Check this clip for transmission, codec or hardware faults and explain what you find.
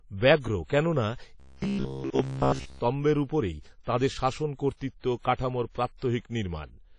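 Two faults are present, one throughout and one in a single stretch.

Throughout, the speech likely went through WMA compression at a low bitrate, which fits about 32 kbps. Coarse quantisation leaves plainly audible ringing, washy hiss and nothing above 10 kHz.

From 1.40 to 2.79 s, new audio likely arrived too seldom, so short buffers of about 15 ms were repeated in place of most of the real audio. This robotic sound from repeated short buffers is a rigid, metallic buzz at 66.8 Hz.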